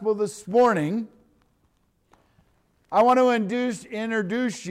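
Hard clipping flattens peaks from 0.56 to 0.71 s and 2.97 to 3.35 s, overdriven by about 3 dB, giving abrupt crackle rather than the rounded warmth of soft saturation.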